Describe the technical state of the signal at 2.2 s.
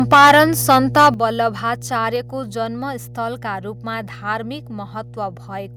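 At 2.16 s the speech and background drop abruptly by about 2 dB, just before "जन्मस्थलका रूपमा धार्मिक". This is a microphone volume stepped down, likely the call software cutting the device's input gain in a single increment, giving a sudden level shift rather than a fade.

Mains hum is also present at this point and throughout the clip. It is a steady 60 Hz tone with low harmonics, fairly strong at roughly 10 dB below the speech. This points to a ground loop or nearby transformer coupling the power line into the signal path.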